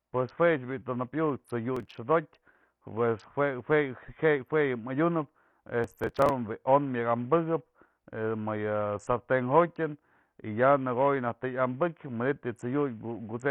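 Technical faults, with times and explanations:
Throughout: Bluetooth SBC compression is the likely cause of the damage across the whole speech clip. The top end keeps thinning out and flickering, with a gritty fizz riding on everything. That fits SBC squeezed to a low bitrate, around 48 kbps. Its crude bit allocation starves the upper sub-bands, so the treble drops in and out, and the coarse quantisation of the remaining bands leaves that grainy, aliased edge.
1.76–1.95 s and 5.84–6.30 s: Processor overload crackle, heard twice as a short burst of harsh, tearing crackle laid over the speech. The first burst is brief and the second runs nearly half a second. The processor fell behind and missed a string of tiny audio buffers in a row, which sounds like buffers of only a few milliseconds each. The missed ones were simply skipped, so each left a small hard-edged gap. Packed that tightly, the gaps merge into crackle that stops as soon as the processor catches up.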